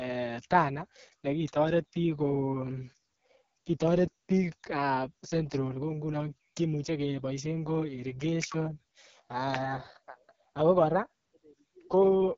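Speech runs through the AMR wideband (HD Voice) codec for its whole length, with heavy damage: the sound is rough and raspy throughout, which fits the lowest 6.6 kbit/s mode, and nothing reaches above about 7.5 kHz. Narrowband AMR would cut far lower, near 3.4 kHz.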